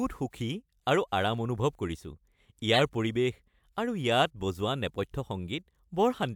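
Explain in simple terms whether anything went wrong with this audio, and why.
A corrupt frame was decoded from about 2.74 to 2.80 s. One chunk of the compressed speech was damaged, and the player played it anyway. The garbled data put sound at the wrong pitches, giving a brief squeak or burst lasting that one frame.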